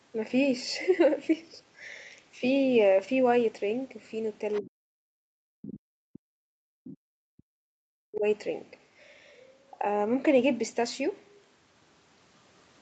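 At 4.53 to 4.61 s a faint, brief second voice sits well below the talker, roughly 20 dB down: the other side's voice leaking through, likely loudspeaker echo the canceller failed to remove. It is an added voice rather than a loss, which sets it apart from suppression.

From 4.6 to 5.02 s, and again from 5.42 to 8.25 s, the talker's own speech is pushed down, at worst by around 40 dB, dipping. This is speech suppressed in double talk, likely the canceller turning everything down while both sides spoke. Unlike a network dropout, it tracks the far talker's activity.

Inside that second stretch, more scraps of leaked far-end voice appear at 6.87 to 6.95 s and 8.16 to 8.2 s, the last one quieter, roughly 25 dB below the speech.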